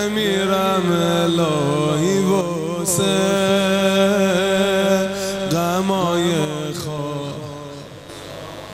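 A mains buzz runs throughout, a raspy 50 Hz buzz about 20 dB below the sound. Its harmonics reach into the kHz range, so it sounds harsher than a smooth hum.

From 2.41 to 2.88 s, and again from 6.45 to 8.09 s, the level falls abruptly by about 6 dB and then recovers. The likely cause is one channel dropping out before the mono sum. It differs from a fade or gain change because the step is sudden and exactly that size.

Inside the second drop, from 6.98 to 7.01 s, DAB burbling adds a short burst of noise. Short blips of noise appear in single sub-bands as bit errors slip past error correction, which sounds different from a clean dropout or click.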